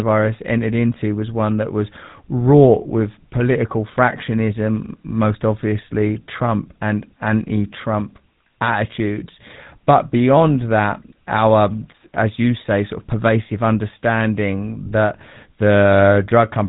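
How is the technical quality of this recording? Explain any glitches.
The whole recording has been through a GSM full-rate codec, and it's pretty obvious from start to finish. It's a constant character rather than a momentary glitch. The codec rebuilds the voice from a vocal-tract filter fed by a sparse, regular pulse train, so the excitation is coarse and the speech comes out buzzy and gravelly. Nothing survives above about 3.8 kHz, which leaves it dull and boxed-in. The overall grain fits the 13 kbps GSM full-rate scheme.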